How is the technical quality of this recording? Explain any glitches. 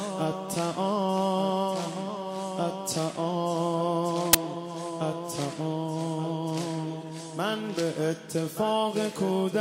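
There's one real glitch, right at 4.33 s: a very short burst of file tags played as audio. An embedded cover picture got read as if it were samples, and since that's compressed data, it comes out as a hard-edged blast of very loud white noise, like a sudden crack of static.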